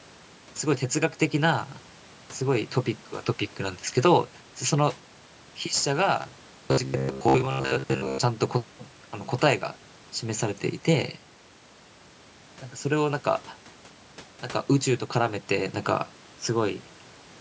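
From 6.22 to 8.20 s the speech turns into a rigid, metallic buzz at about 67 Hz. This robotic sound likely comes from repeated short buffers: a 15 ms segment looped while most of the real audio was skipped, so the buzz follows the original speech only roughly.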